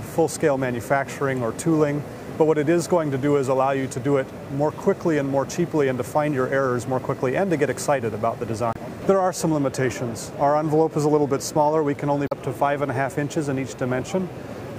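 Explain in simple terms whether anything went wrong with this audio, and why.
Damaged data in a compressed stream: twice, part of the compressed file was corrupted, so the decoder misread those frames and had to search for the next good one. The sound breaks briefly, from 8.71 to 8.76 s and from 12.25 to 12.33 s.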